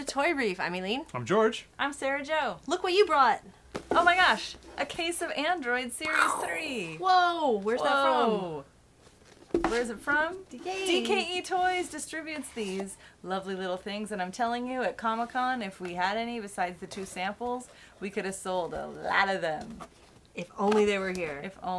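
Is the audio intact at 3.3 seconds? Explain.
Yes, the audio is intact at 3.3 seconds, with no dropout, glitch or other fault at that point.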